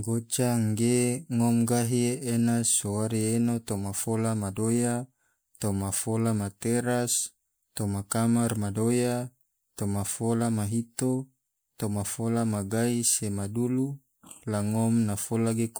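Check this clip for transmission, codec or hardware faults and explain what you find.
The speech carries one codec fault that runs from start to finish: generation loss. The smearing has the character of stacked MP3 passes, likely repeated re-encoding, which fits a 128 kbit/s MP3 chain run about three times. Each pass quantises on a shifted frame grid, so the noise and spectral holes pile up. The voice sounds swirly and hollow, with blurred consonant onsets. On a spectrogram, the upper bands look patchy and speckled with flickering gaps, and transients smear sideways in time.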